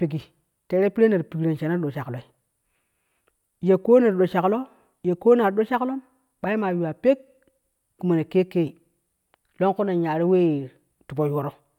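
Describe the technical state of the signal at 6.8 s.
At 6.8 s the speech signal is intact, with no audible fault at that point.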